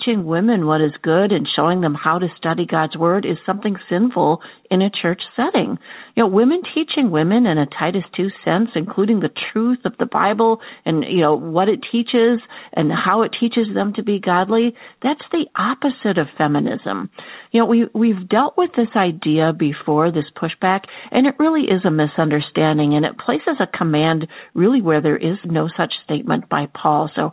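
No technical faults are audible.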